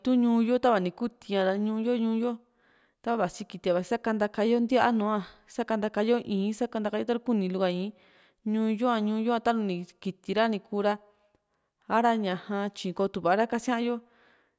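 A speech recording with no technical faults to point to. Nothing in it marks a problem at any moment.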